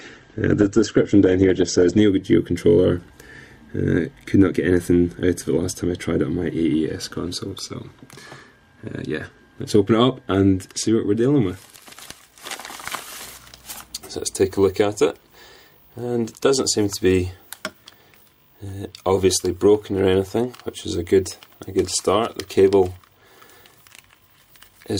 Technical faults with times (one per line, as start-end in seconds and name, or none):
0.00-2.00 adaptive stream starting at a low bitrate